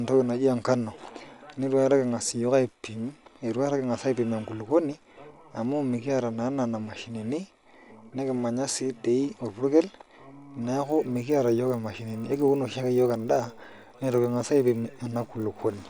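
From 10.8 s to the end, at about 15.9 s, the speech picks up a low buzz at 50 Hz, a sign that the resampler restarted on every block. Each 20 ms chunk was converted on its own, so the filter at every block edge lacked the real neighbouring samples and left a small error there. Fifty of those per second fuse into a rough buzz that rides on the voice and drops away in the pauses. It fits an upsampling step from 24 kHz to 48 kHz.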